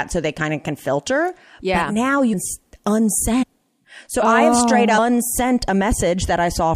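Speech in which compressed frames are skipped: the decoder drops whole 23.2 ms frames, so the audio jumps ahead by roughly 150 ms at 2.32 s, and by roughly 300 ms at 3.42 to 3.44 s and again at 4.97 s.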